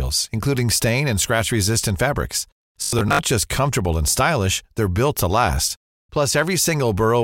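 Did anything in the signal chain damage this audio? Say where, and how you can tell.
Yes. From 2.83 to 3.19 s the speech becomes a metallic 50 Hz buzz. This is robotic sound from repeated short buffers, likely at the driver or buffer stage: a 20 ms block loops while about half the audio is skipped. Mains hum would sit under the speech rather than replace it.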